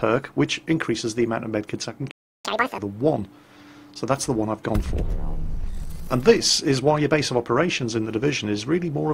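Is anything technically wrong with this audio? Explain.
Yes, there are two related problems right next to each other.

First, a playback stall at 2.11 s. The sound just cuts out mid-flow and stays silent for about 0.33 s, until 2.45 s. That gap is likely the player running dry of data or having its audio thread blocked, so nothing reaches the output until it recovers. Then the audio resumes.

Second, right after that, from 2.45 s to 2.78 s, there's catch-up at higher speed. The player is burning through its backlog by resampling at 2x, so for about a third of a second everything runs twice as fast and jumps up in pitch by around ten semitones, giving a brief chipmunk-like effect. After that, speed and pitch drop back to normal.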